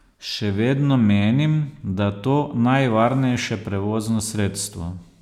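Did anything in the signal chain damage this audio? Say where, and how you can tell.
No, nothing in the chain from capture to playback has left an audible mark on this speech, so there is no stage to point to.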